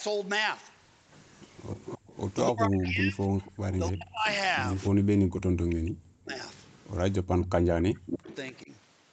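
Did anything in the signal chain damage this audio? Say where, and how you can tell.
Yes. The damage is in the call processing stage, specifically the acoustic echo cancellation on the loudspeaker end.

A faint, delayed copy of the speech trails the talker from 1.07 to 2.34 s, from 3.42 to 4.86 s and from 5.69 to 8.52 s. It lags by a steady 288 ms and sits roughly 15 dB below the direct voice, dropping to around 20 dB below in the middle stretch. This is echo leak. The likely cause is a loudspeaker on one end whose canceller failed to subtract the microphone pickup, so the residue was sent back down the line.

The speech itself dips or breaks up in three places: from 2.51 to 4.25 s, where about a second in total is affected with drops near 35 dB; from 6.01 to 6.34 s; and from 8.08 to 8.70 s, where the drops reach around 40 dB. These dips overlap stretches where the echo is also present. 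This is speech suppressed in double talk. The likely mechanism is that the canceller could not tell the local talker from the loudspeaker return and attenuated both.

Between 4.93 and 5.35 s the room sound drops away abruptly for about a fifth of a second, falling by up to about 38 dB, then comes back. This is background gated by the echo canceller. While the loudspeaker signal was active, the canceller clamped the microphone path hard, taking the ambient floor down with it until it released.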